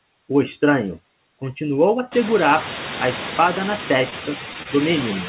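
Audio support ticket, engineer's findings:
Noise suppressor artifacts, whole clip. Background sinks between phrases and swells back under speech. Room noise steps up by about 21 dB around 2 s. The suppressor judges bands per frame as steady noise and pulls them down by about 8 dB. The audio band stops near 4 kHz, which fits a G.711 A-law call codec.

Short stall from a late packet, 4.10–4.14 s: sound held about 17 ms too long, then resumes from the same point. 4.63–4.67 s: same symptom, about 25 ms held. A packet arrived late, so the jitter buffer ran dry and the receiver stretched the last audio until it came. No content lost. Playout delay grows by the held amount each time.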